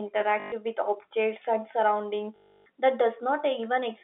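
At 0.4 s and 2.36 s, packet loss with last packet repeated breaks the speech. The gaps last 120 ms and 300 ms. The receiver replays the last packet. The longer run buzzes robotically near 50 Hz, which fits 20 ms packets.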